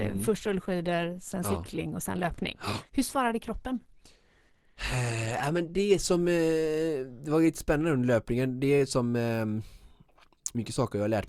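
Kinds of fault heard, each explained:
Adaptive stream starting at a low bitrate: the speech sounds dull and smeared for the first 6.0 s, with nothing above 12.1 kHz, then clears suddenly without a gap. The player opened on a lean version, fitting Opus near 16 kbit/s, and moved up to about 64 kbit/s after measuring the connection.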